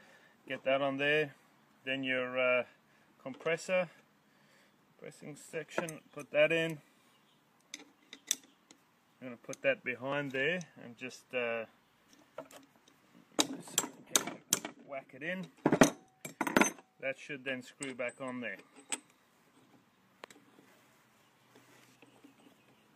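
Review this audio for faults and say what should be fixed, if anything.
There's overlap between stream segments at 2.19–2.22, 8.15–8.17, 10.12–10.16, 14.09–14.11 and 16.06–16.09 s, lining up with 2-second segment boundaries. Each time two segments' timestamps overlap, the player trims about 30–40 ms of audio that wasn't actually duplicated, so the waveform jumps and you hear a tiny skip. To prevent it, have the packager write contiguous, non-overlapping segment timestamps.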